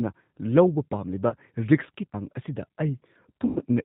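From start to finish you can hear the G.729 codec at work, and its damage is plainly audible. The speech is squeezed through a vocal tract model, a pitch predictor and a handful of pulses per frame, so it comes out a bit rough and synthetic. Nothing above 4 kHz is there, and the grainy, band-limited texture fits an 8 kbit/s G.729A stream.

At about 1.30 to 1.35 s there's a short patch of VoIP packet loss concealed by the speech codec. Roughly 20 ms of audio went missing, which fits a couple of lost frames. The decoder fills the gap by stretching its last pitch and filter settings, so the sound smears briefly into a buzzy tone or coloured noise before normal decoding picks up again.

The second loss, from about 3.47 to 3.59 s, is much longer, around 90 ms. Here the concealment has to keep extrapolating, lowering the gain frame by frame, so you hear a buzzy tone or coloured noise that fades out. 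Because each frame builds on the one before, the audio stays weak or distorted for a little while after packets start arriving again.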